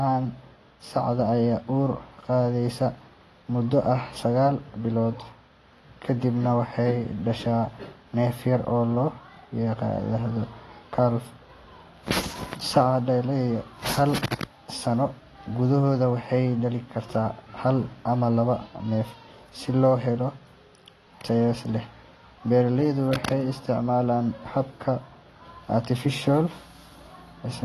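From start to end, the speech sounds dull and smeared. Nothing reaches above 12.1 kHz. Sibilants carry a fizzy, warbling edge. The cause is likely AAC compression at a low bitrate, fitting about 32 kbps AAC-LC. The encoder discards high bands and coarsely quantises the rest.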